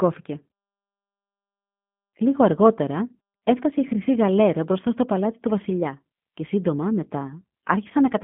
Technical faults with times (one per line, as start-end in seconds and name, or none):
0.00-8.23 G.729 codec